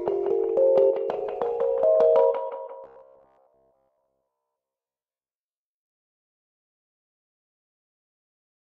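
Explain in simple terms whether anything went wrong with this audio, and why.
Something did go wrong, from 2.84 to 5.64 s. The sound turns into a stiff, metallic buzz at about 66.7 Hz. This is robotic sound from repeated short buffers. Fresh audio likely stopped arriving fast enough. To fill the gaps, the same tiny 15 ms slice was played over and over. That repetition creates the fixed buzz. Roughly two thirds or more of this stretch is repeated audio, so the real sound there is mostly lost.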